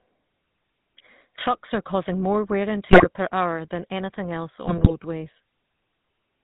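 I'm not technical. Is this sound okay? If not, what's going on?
No, it isn't. The whole clip has gone through the GSM full-rate codec, the speech compression used on early digital mobile phones. It rebuilds the voice from a rough model of the mouth and throat driven by a simple pulse pattern, and it throws away everything above 4 kHz. That's why the voice sounds buzzy, gravelly and a bit muffled all the way through, like an old mobile call.

On top of that there are GSM bit errors, from about 2.86 to 3.07 s and again from about 4.62 to 4.98 s. This is what a weak phone signal does: scrambled bits reach the decoder, which then rebuilds the sound with the wrong tone or loudness for brief moments. You hear the voice break up into squawks, pops and gargling in those two spots, with the second burst lasting a little longer.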